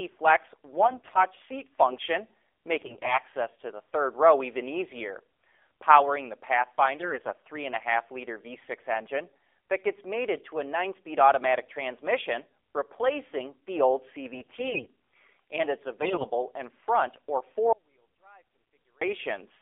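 This is a speech recording carried over a mobile call and coded with the AMR narrowband mobile codec. The band runs only from about 300 Hz to 3.5 kHz, so the sound is thin and boxed in. The voice also has a buzzy, synthetic edge. That degree of damage fits a low AMR-NB mode near 7.4 kbps, where few bits remain for the pulses driving the vocal-tract model.

On top of that come five bursts of AMR bit errors. They fall at 0.78 to 1.24 s, just before "seat function", then at 2.78 to 3.18 s, 7.00 to 7.33 s, 14.34 to 14.86 s, and 16.02 to 16.27 s, between "and it's" and "in front or". In each burst the pitch and loudness roughly hold, but the voice turns hoarse, scratchy and gargly. Flipped bits on a weak radio link misplace the excitation pulses and skew the finer gain and spectral values. The checksum still lets those frames through. The first and last bursts sound roughest.

Finally, there is an audio dropout to a faint residue from 17.73 to 19.02 s, about 1.29 s, right after "in front or". 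The speech cuts off abruptly. Only a faint trace is left, far below normal level. Then it returns mid-flow. The likely cause is a lost signal on a path that stayed live.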